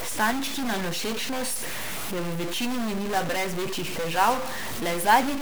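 From start to finish the speech carries a harsh, buzzy distortion with noise filling the pauses, most likely a stuck bit forcing steps of about -30 dBFS.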